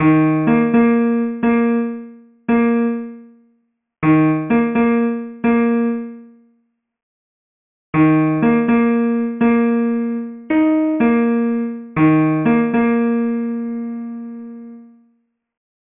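Aliasing throughout: downsampling without filtering folds content above 3 kHz back into gritty, unrelated tones, consistent with a 6 kHz rate. Unlike plain band-limiting, the sound is harsh, not dull.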